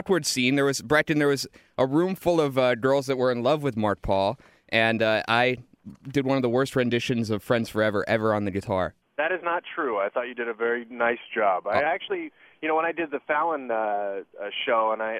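From 11.20 to 11.86 s, clock-matching software likely slowed playback in a single drift correction step to refill its buffer. The sound runs about 5.2% slow and drops roughly 93 cents, nearly a semitone, then snaps back to normal pitch and speed.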